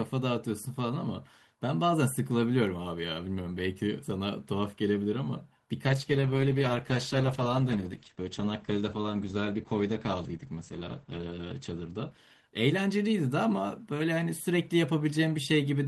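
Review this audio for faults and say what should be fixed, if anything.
Call bitrate drop, from 5.86 s to 12.87 s. The sound turns coarse and muffled as the encoder, told to spend far fewer bits, quantises more roughly and trims the top of the spectrum, with the audio bandwidth falling from 20 kHz to 8 kHz. The worst stretch lasts about 5.7 s, and its dull, watery quality points to a bitrate around 10 kbps, down from roughly 32 kbps. To prevent it, give the call a steadier bandwidth estimate or a higher minimum bitrate so the encoder isn't pushed this low.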